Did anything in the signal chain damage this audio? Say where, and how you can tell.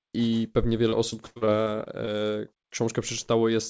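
Yes, the network stage. Between 0.90 and 2.09 s the speech turns choppy and robotic: repeated packet loss, with roughly eight short holes, the longest about 58 ms. The jitter buffer patches each hole by stretching the last bit of sound, so about 18% of that stretch is concealment, which gives it that chopped texture. The G.722 call path's 8 kHz top-end limit applies throughout, but that's the codec, not the damage.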